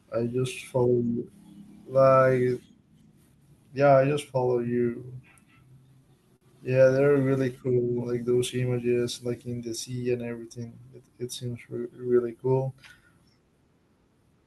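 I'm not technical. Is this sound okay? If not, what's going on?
No. Two short stretches of the speech have problems.

From 5.15 to 6.44 s, just after "yeah I just follow", there are brief ticks and little smears. These are scattered short gaps. About seven tiny pieces of sound went missing in transit, the longest around 50 ms, and the receiver covered each one by stretching the sound just before it.

From 10.58 to 11.08 s, between "in the sea and" and "it seems", the speech briefly sounds rushed but keeps the same pitch. This is a jitter buffer speed-up. The receiver had built up extra waiting audio, so it trimmed out tiny slices, roughly 70 ms in all, and played that half-second about 13% faster to catch up.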